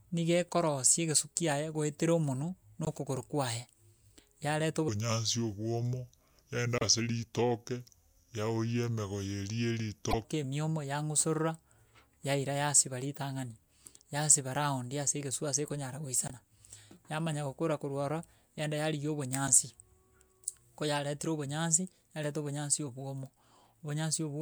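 A short glitch at 2.85–2.88 s, just after "goetera omonwe", is damaged data in a compressed stream: corrupted frames make the decoder lose sync and jump ahead to the next frame. From 4.88 to 10.25 s the speech turns deep and slow, about 5 semitones lower at 0.749 speed. This is a section at the wrong speed, likely from playback against the wrong clock. Similar blips recur at 6.78–6.82 s, 10.11–10.14 s, 16.28–16.31 s after "ase egesu ase ekonyara", and 19.47–19.50 s after "yaenda yarigia".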